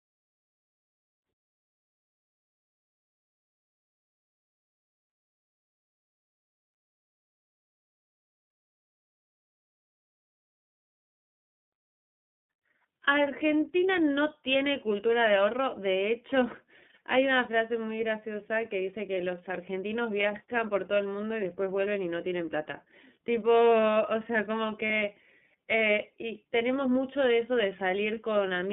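Throughout, the speech carries iLBC codec damage: the band runs only from about 150 Hz to 3.6 kHz, and each frame is coded independently, giving a rough, synthetic edge, consistent with 13.33 kbps 30 ms mode rather than smeared transform-codec artefacts. At 24.86 to 24.91 s, lost iLBC frames leave a brief buzzy held vowel, fitting one 30 ms frame, and the voice recovers immediately instead of staying wrong afterwards.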